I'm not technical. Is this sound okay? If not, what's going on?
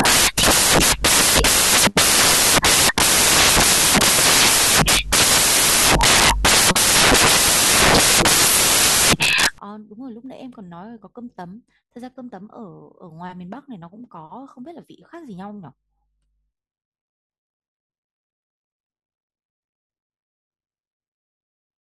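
No. From the start to 9.58 s the speech is buried under loud hiss, the result of samples built from the wrong bytes: each sample's pieces were put together wrongly.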